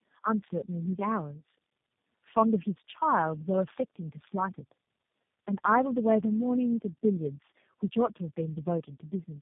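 From start to finish the speech carries tandem speech coding: it sounds as though it passed through three low-bitrate speech codecs in a row, each one re-encoding the previous one's already damaged output, so the losses stack. The result is rough, muffled and warbly, with a watery, unsteady quality on vowels. On a spectrogram, energy stops at a flat ceiling near 3.6 kHz, and the formant bands look blurred and patchy.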